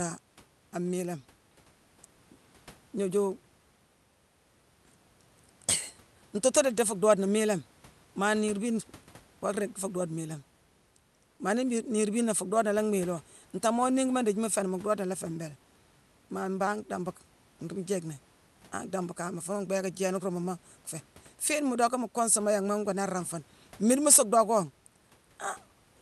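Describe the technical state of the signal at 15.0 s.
At 15.0 s the signal is intact, with no fault present, only the call codec's usual band limit around 12 kHz and the room's background noise sitting about 33 dB below the speech.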